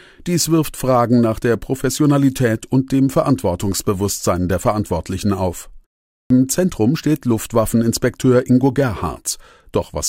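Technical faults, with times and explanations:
6.23–6.30 s, clipped start after a pause: the output needs time to wake after a 0.45 s silence, swallowing the first 73 ms, so speech starts abruptly.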